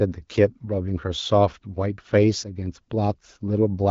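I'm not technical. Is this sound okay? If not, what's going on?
Yes, this speech recording sounds fine, with nothing going wrong at any point, just the normal sound of an HD Voice phone call.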